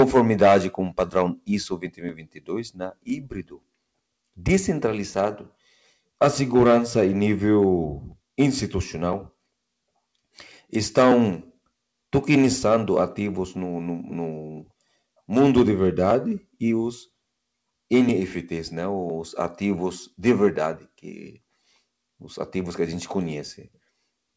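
Across the whole clip, a noise suppressor applied to music or sounds is audibly at work. A speech-tuned suppressor treats sustained tones, ambience and decays as noise, so level swings by around 5 dB, attacks pass while held parts and tails sag, giving a pumping, thinned-out texture.

From 1.75 to 2.5 s and again from 2.71 to 3.64 s, the sound is cut by the noise suppressor. It misjudges the material as noise and pulls it down by up to about 19 dB, roughly 0.7 s of sound each time, so sustained content sinks and its decay shortens abruptly. Throughout, the band stops at 8 kHz, which fits a wideband call codec such as G.722.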